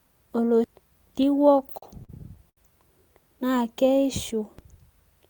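A speech recording with two DC steps and a stretch of repeated stalls (stutter). At 1.23 s the waveform's zero line jumps abruptly, producing a short low thump. The offset then bleeds away slowly, as a high-pass around 2 Hz would pull it back, while the speech itself carries on unaltered. The same DC step recurs at 4.59 s, just after "naa keishu", with the same thump and slow decay. A sudden offset like this points to a converter recalibrating or an input carrying a bias being switched into the path. Between 1.53 s and 2.59 s the playback stalls seven times. Each stall is bridged by holding and continuing the preceding sound, with the longer holds faded, for about 195 ms of filled audio in total, roughly 18% of that span. The longest single gap is 72 ms. Nothing is lost outright, but the speech drags and stutters through that section. This is what happens when packets arrive late or slower than the playout rate, so the jitter buffer repeatedly runs dry and the receiver has to improvise until data catches up.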